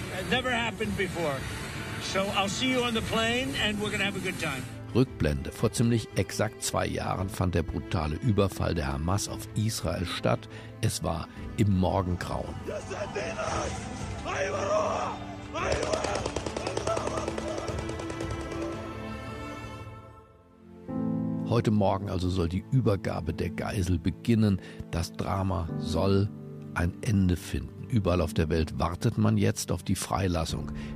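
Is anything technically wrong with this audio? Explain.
No, nothing technically wrong stands out here; the audio comes through without any glitches or problems worth pointing out.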